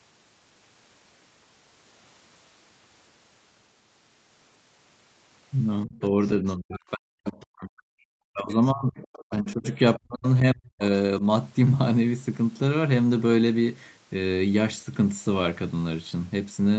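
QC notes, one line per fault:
5.85–9.65 s and 9.97–10.82 s, speech suppressed in double talk: the speech dips and breaks up in pieces, falling by up to about 40 dB, for roughly two seconds in the first span and under a second in the second. The echo canceller likely heard both sides talking at once and pulled the near talker down along with the echo.
5.99–6.29 s, 7.26–7.32 s, 8.50–8.54 s, 8.97–9.78 s and 10.83–10.87 s, other side's voice leaking through: faint scraps of a second voice sit about 20 to 30 dB below the speech, mostly brief blips plus two longer stretches. This is likely loudspeaker echo that the canceller failed to remove from the microphone signal.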